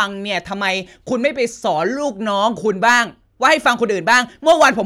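Speech, with hard clipping in three places in the second half: 2.88 to 3.01 s, overdriven by about 5 dB; 3.45 to 3.69 s, by about 3 dB; and 4.11 to 4.68 s, again by about 5 dB. In each stretch the peaks exceed what a stage in the chain can pass, so they are sheared flat and the loud parts take on a gritty, crackling edge. A waveform shows squared-off tops pinned at one level, and a spectrogram shows broadband harmonic smearing reaching high up during those spans.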